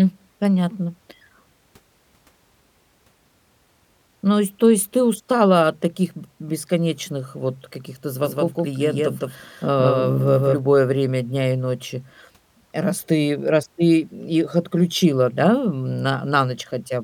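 From 8.24 to 10.58 s, a doubled audio track, likely from an out-of-step second capture, repeats the speech about 150 ms late at equal level, visibly duplicating every waveform burst and spectrogram stroke.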